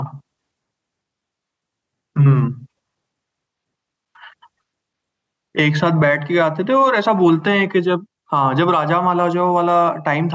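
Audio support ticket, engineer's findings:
Gain pumping, whole clip. Level swinging around 10 dB. Likely input gain set way too hot, with a fast limiter clamping each peak and squashing dynamics. Call mic processing band-limits the top end at 8 kHz as expected.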